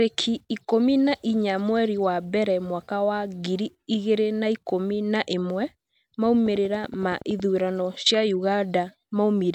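From 6.46 to 7.41 s there's a train of clicks: around ten evenly spaced ticks at 10.7 per second, peaking about as loud as the speech itself. It's likely interference from nearby gear or a faulty connection or power supply, and it ticks right over the talking.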